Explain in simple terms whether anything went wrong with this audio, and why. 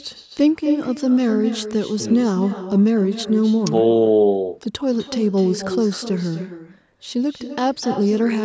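Echo with no canceller runs through the whole recording. The person at the other end was playing the call on a loudspeaker, and their microphone picked it up. Nothing removed it, so every phrase comes back about a third of a second later as a quieter, hollower copy. The missing deepest bass and the lack of anything above 8 kHz come from normal call processing and are not a fault.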